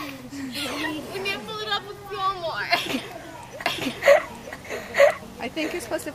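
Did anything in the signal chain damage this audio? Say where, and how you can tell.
Yes. From 3.66 s to the end, a doubled audio track is present: a second, full-band copy of the sound runs roughly a second behind the first, at about the same level. It cuts in abruptly with no decay or room colouring, so it is not an acoustic echo. This likely comes from the driver or buffer stage capturing the signal twice through a slower second path, or from an edit that left two offset copies in the mix.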